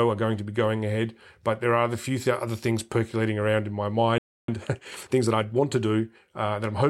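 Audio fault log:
4.18–4.48 s, playback stall: the speech stops mid-flow and the output goes silent for about 0.3 s (301 ms) before the sound resumes. A break like this inside running speech is what happens when the output has nothing to play. The likely cause is the player running short of buffered data or its playback thread being blocked, so nothing reached the output until it recovered.
4.48–5.68 s, time-compressed catch-up: for 1.2 s right after the gap, the speech sounds hurried at 1.25 times normal speed while its pitch stays the same. Having fallen behind during the stall, the player works off the backlog by removing small slices of audio and cross-fading across each join. This shortens the material in time rather than speeding it up like a faster tape, which would have raised the pitch.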